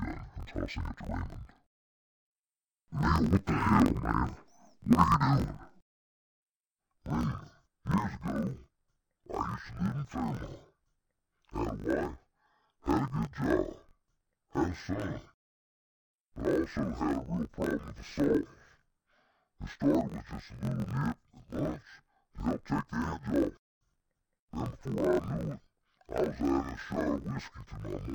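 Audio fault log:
throughout interleaved audio read as planar: the speech sounds an octave low, doubled and choppy, pulsing at 46.9 Hz. Each 21.33 ms block of alternating left and right samples, which fits a 1024-sample block, is split into halves that play together at half speed.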